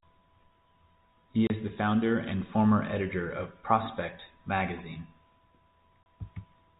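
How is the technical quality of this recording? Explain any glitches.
The speech is narrowband telephone audio, with nothing above 4 kHz through G.711 coding, and it is broken twice by short gaps. At 1.47 to 1.50 s and 6.03 to 6.06 s, a hard-edged 30 ms hole of silence cuts the speech. This is packet loss filled with silence, which fits one lost packet each time, replaced by nothing.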